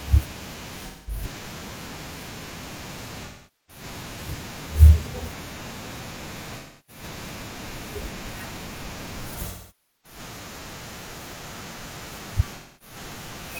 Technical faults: AAC frame loss with concealment

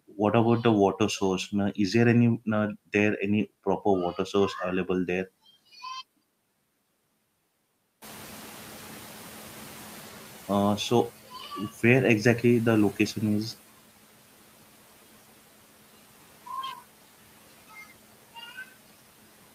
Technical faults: noise suppressor catching up

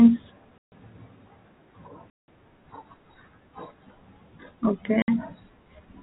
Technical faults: packet loss filled with silence

